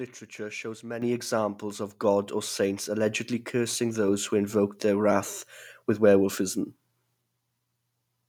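At 1.02 s the whole speech signal jumps abruptly louder by about 9 dB, and the background noise rises with it in the same instant. This is the microphone volume stepped up: the call software judged the microphone input too quiet and raised the device's input volume in a single jump instead of ramping it, lifting voice and room sound together.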